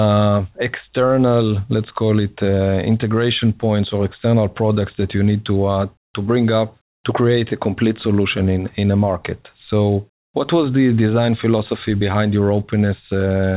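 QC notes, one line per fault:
6.04–6.14 s, comfort noise in place of the background: the sender's voice detector likely judged this pause to be silence and stopped transmitting, so the receiver filled the 100 ms gap with generated noise of the RFC 3389 kind. The real background, already about 71 dB below the loudest sound, gives way to a flat, featureless hiss about 16 dB quieter, heard as a brief drop into blankness, band-limited to 4 kHz like the surrounding G.711 call audio.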